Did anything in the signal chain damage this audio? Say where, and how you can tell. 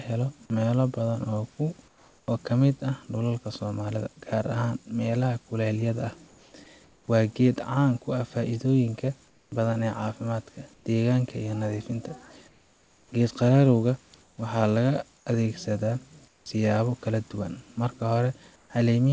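Yes, in call processing: the gaps in the speech sound like the sender's discontinuous transmission, with comfort noise in place of the background at 1.88–2.28, 6.28–7.08, 9.28–9.52 (after "ku ah faa’iidooyin ka"), 10.74–10.86, 12.48–13.12 (before "geed qararowga"), 14.22–15.26, 16.28–16.46 (before "siyaabo kala duwan") and 18.56–18.70 s. In these spans the real room noise gives way to a flat, featureless hiss about 4 to 10 dB quieter, most likely synthetic noise generated at the receiver.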